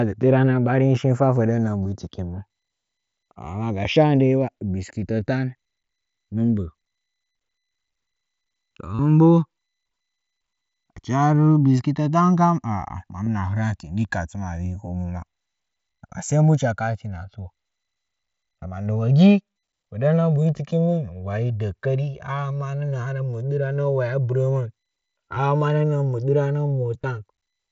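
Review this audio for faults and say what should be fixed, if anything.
Channels drifting apart, throughout: the two channels were captured on devices running from separate clocks, with a mismatch of roughly 70 parts per million, so the offset between them creeps steadily until it reaches around 2 ms by the end. When the channels are summed, that changing delay moves comb-filter notches slowly across the spectrum, heard as a gradual flanging sweep over the speech. Recording both channels from one device, or resampling one channel against a shared clock reference, would prevent this.

Concealed Bluetooth headset packet loss at 1.84 s, 8.95 to 8.99 s, 13.25 to 13.27 s, 25.35 s and 27.02 s: packets between headset and phone dropped out, and the receiver filled each gap by repeating the best-matching recent stretch of waveform. The 37.5 ms gap near 9 s is long enough to produce a brief buzzy, held tone with a slight warble as real audio resumes. 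The link runs through the mSBC headset codec, which limits speech to 8 kHz. Keeping the headset close to the phone and away from competing 2.4 GHz traffic would reduce these losses.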